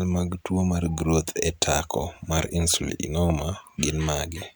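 No technical faults are audible anywhere in the speech recording.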